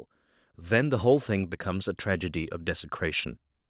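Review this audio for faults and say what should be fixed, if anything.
Automatic gain rising runs from 0.68 s to 3.33 s: the level climbs by about 5 dB as the gain control, judging the input too quiet, steadily turns itself up. Because the gain acts on the whole signal, the background swells in step with the speech over those two and a half seconds. That shared rise separates it from a talker moving closer to the microphone, which would lift the speech but leave the room noise roughly where it was. The narrowband sound, with nothing above 4 kHz, fits a G.711 mu-law call path at 64 kbps. To prevent the rise, set a proper input level at the source, or freeze or slow the automatic gain control so it does not chase quiet passages.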